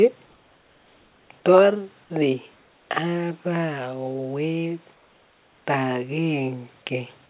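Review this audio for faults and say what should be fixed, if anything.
Comfort noise in place of the background appears twice, from 0.26 to 1.3 s and from 4.94 to 5.66 s. In these pauses the real room background, already about 35 dB below the loudest speech, gives way to a smooth, featureless hiss about 3 dB quieter. This is likely discontinuous transmission, where the receiver synthesises noise while the sender is silent. Unlike a noise gate, the pauses never drop to true silence. The audio also stops near 4 kHz, which fits a narrowband telephone codec. To prevent this, disable DTX on the sending side, or raise the comfort-noise update rate so the substitute follows the real background more closely.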